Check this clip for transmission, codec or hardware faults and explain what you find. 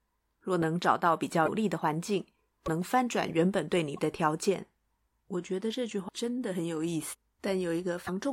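Two kinds of codec fault are audible in this speech, both tied to missing compressed frames.

At 1.45–1.48 s, 2.65–2.68 s, 3.96–3.99 s, 6.08–6.10 s and 8.06–8.09 s there are brief chirps, noise bursts or short holes about 30 ms long, roughly one 26.1 ms frame, where the audio lurches forward. The likely cause is a broken MP3 bit reservoir: after a cut, the next frame reaches back for borrowed data and decodes bytes from the wrong frame.

At 7.12–7.14 s the speech jumps ahead by about 300 ms, joined by a short smeared blip rather than a sharp click. This is compressed frames skipped, consistent with around ten 26.1 ms frames never being decoded, while the overlap between neighbouring frames blurs the seam.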